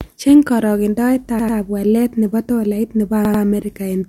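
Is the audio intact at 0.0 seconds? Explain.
Yes, the audio is intact at 0.0 seconds, with no fault there.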